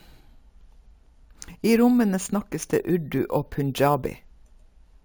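Speech with imaging from sample-and-hold upsampling throughout: a 16 kHz source was lifted to 44.1 kHz by repeating samples, leaving metallic fizz between 8 and 16 kHz, about 22 dB down.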